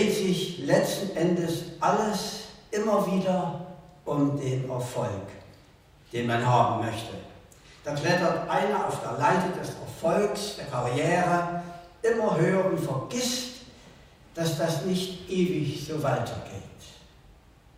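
No technical faults can be heard anywhere in the recording; the signal stays steady and intact throughout.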